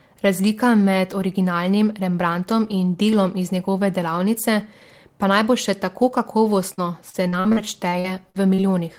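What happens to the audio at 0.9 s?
Nothing goes wrong at 0.9 s; the speech carries on there without any dropout, click or distortion.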